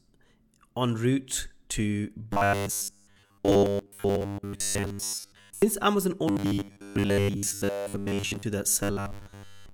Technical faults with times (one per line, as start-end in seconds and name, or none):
2.33-5.62 robotic sound from repeated short buffers
6.28-8.43 robotic sound from repeated short buffers
8.83-9.73 robotic sound from repeated short buffers